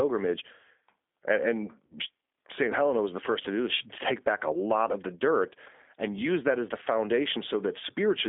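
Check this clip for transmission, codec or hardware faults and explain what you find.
Two faults are audible: low-bitrate codec damage throughout and one concealed dropout.

G.729 codec, throughout: the speech is rebuilt from a filter, pitch predictor and sparse pulses, which fits 8 kbit/s, leaving a rough, synthetic, band-limited sound between 250 Hz and 3.6 kHz.

VoIP packet loss concealed by the speech codec, 1.86 to 1.96 s: about 40 ms of audio goes missing, which fits two lost packets. The decoder extrapolates from its last frame, producing a fading smear with weak recovery afterward.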